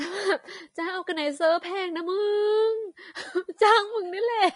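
Vorbis compression runs throughout the speech, likely from a low-bitrate encode of about 31 kbps. Nothing remains above 10.6 kHz, and the treble below that cut-off is so coarsely quantised that its detail turns to hiss, sounding plainly grainy and rough, with blurred attacks.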